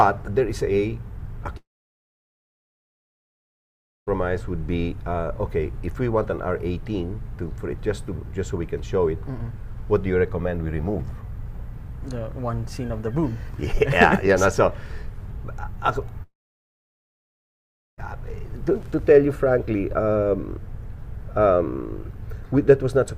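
Two long network dropouts break up this audio, at 1.57 to 4.09 s and 16.23 to 18.00 s. Each time the last sound smears into a brief fading buzz, then roughly 2.4 s and 1.7 s of near silence, likely lost packets, and the audio resumes with that stretch missing.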